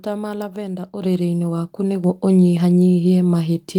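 At 1.02 s, after "ma lavender", and again at 2.04 s, the microphone volume stepped up by about 6 dB, then about 3 dB. Voice and background noise jump together in a single step, unlike a gradual gain ramp.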